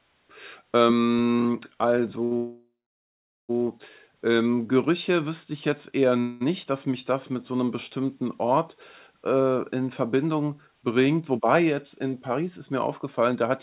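At 2.24 s a sound is held about 67 ms too long with a faint buzz or dip: a short stall from a late packet. The jitter buffer ran dry and the receiver stretched the last sound until the packet arrived, losing nothing.

From 2.37 to 3.51 s the audio halts in a call audio freeze. The last sound decays into a fading buzz or hiss, then about 0.79 s of silence, before resuming exactly where it stopped, so about 1.12 s is inserted. The likely cause is packets held up in transit, emptying the jitter buffer.

Between 4.43 and 4.74 s, just before "wüsste ich jetzt eher", the speech drags at about 86% speed without changing pitch, adding about 51 ms. This is a jitter buffer slow-down, with single pitch periods or bits of pauses repeated to rebuild the buffer's reserve.

From 6.20 to 6.43 s, between "wüsste ich jetzt eher" and "dass mich das mit", a second call audio freeze continues the last sound as a fading buzz or hiss for about 0.21 s, with no silent stretch, before the speech carries on.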